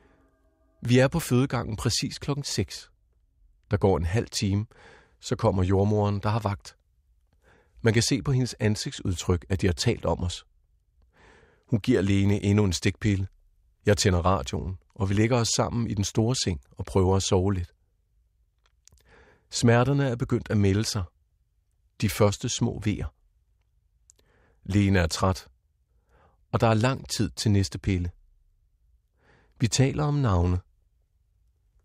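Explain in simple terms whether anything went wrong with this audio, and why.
Listening to the recording, nothing stood out as having gone wrong.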